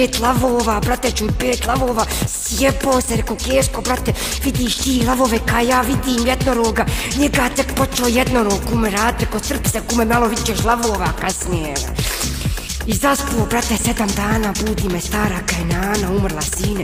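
No technical faults can be heard anywhere in this recording. The audio runs on without interruption, and there is nothing at any point that calls for comment.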